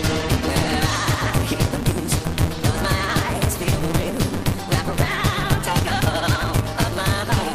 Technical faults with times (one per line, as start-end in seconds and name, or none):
0.00-7.54 block size mismatch (truncated)